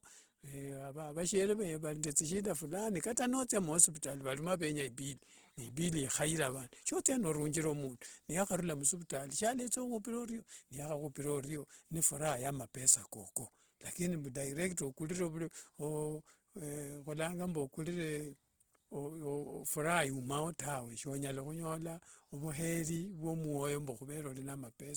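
Opus compression runs throughout this speech clip, and its damage is plainly audible. The sound keeps a full-width spectrum reaching up to about 20.2 kHz, yet the speech comes across rough and grainy rather than swirly, as the encoder fills bands it cannot afford to code properly with folded or noise-like content. That texture, from the music-oriented CELT mode starved of bits, points to a likely rate of around 16 kbps.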